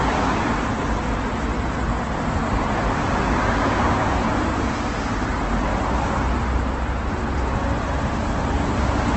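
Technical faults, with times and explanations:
Throughout, Opus compression: sound turns heavily grainy and rough with nothing above 8.1 kHz, likely a music-mode encode near 12 kbps filling starved bands with noise.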